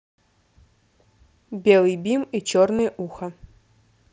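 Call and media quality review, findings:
Short buzzy hold around 2.77 to 2.79 s, about 22 ms, with a slight warble where real audio comes back. Concealed Bluetooth headset packet loss: the receiver filled the gap by repeating recent waveform, which fits a run of roughly three dropped mSBC frames.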